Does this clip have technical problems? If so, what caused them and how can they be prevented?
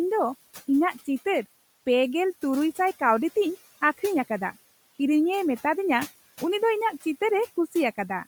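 Yes. Noise suppressor artifacts run through the whole clip. The suppressor pulls the background down by about 14 dB between phrases and lets it back up under speech. A spectrogram shows the noise floor dipping and rising in blotchy patches rather than lying as a steady haze. The room noise itself sits about 20 dB below the speech. To prevent this, lower the suppression depth or turn it off when the room is already this quiet.

The speech also carries a plainly audible grainy, breathy edge throughout, likely from Bluetooth LC3 compression in 10 ms frames, which fits a 48 kbps stream. On a spectrogram the upper bands look speckled and noise-filled, with blocky time smearing, though energy still reaches 20.1 kHz. To prevent this, use a higher-bitrate LC3 setting or record over a wired path.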